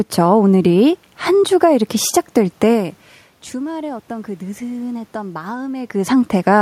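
No technical faults can be heard in this speech recording.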